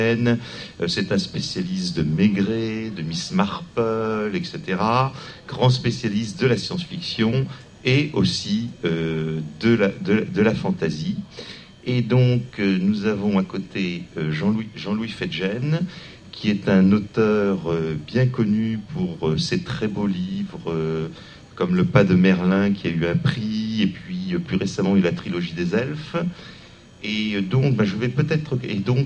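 No technical faults can be heard anywhere in the signal, which stays steady and intact throughout.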